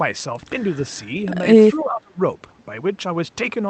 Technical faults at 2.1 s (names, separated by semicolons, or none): speech suppressed in double talk